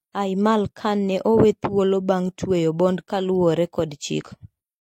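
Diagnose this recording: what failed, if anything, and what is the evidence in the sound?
Codec stage: compressed frames skipped at 4.18–4.23 s. The speech jumps ahead about one 46.4 ms frame, roughly 50 ms of audio left out.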